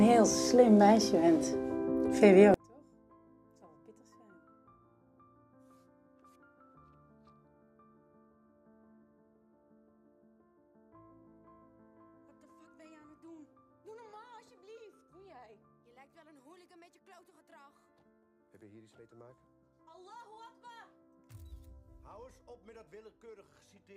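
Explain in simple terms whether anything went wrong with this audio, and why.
From 2.54 s to the end, the sound drops away almost completely, leaving only a faint trace. The likely cause is one channel inverted. One stereo side is flipped upside down. When both sides are combined, they cancel each other out.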